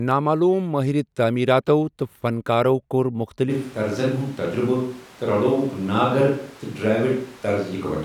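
From 3.51 s to the end, after "فنکارو کوٚر", the speech turns suddenly hollow and roomy, with room noise roughly 25 dB down. This is likely a switch to a distant microphone.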